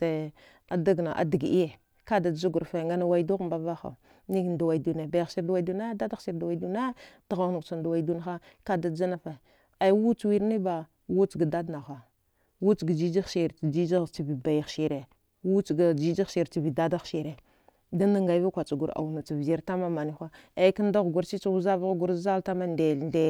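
Nothing stood out on listening to this recording.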